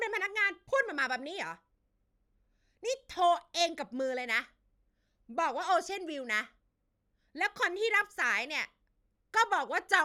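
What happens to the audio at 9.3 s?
Nothing goes wrong at 9.3 s; the speech carries on intact through that moment.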